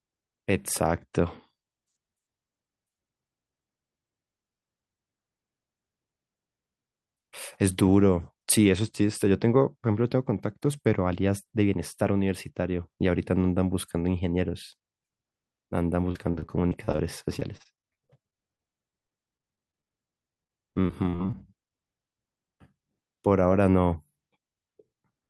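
From 16.11 to 17.05 s, then 17.39 to 19.92 s, and 20.34 to 21.34 s, the speech breaks up with repeated packet loss (robotic sound). Audio arrives with holes, one after another. Each hole is bridged by stretching the last sound. The longest patches run 37, 26 and 23 ms. About a quarter, 15% and a fifth of each span is filled in this way. The speech turns choppy, with pieces missing.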